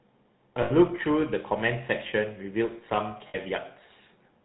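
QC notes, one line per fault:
throughout GSM full-rate codec: the speech has a plainly audible buzzy, gravelly roughness and nothing above 4 kHz, so it sounds dull and closed-in. The codec reduces the voice to a vocal-tract filter driven by a coarse train of regularly spaced pulses, keeping only a fraction of the excitation detail. The result fits a 13 kbps full-rate stream, and the pulse-like excitation is what gives the grainy, buzzing texture.
0.62 to 0.71 s and 3.28 to 3.38 s lost GSM frames: at both points the sound briefly freezes into a rough, metallic ring. When frames go missing, the decoder holds on to the settings of the last good frame and repeats them at decreasing level. The first gap runs about 80 ms and the second about 60 ms, both short enough that the ring is heard before any full fade to silence.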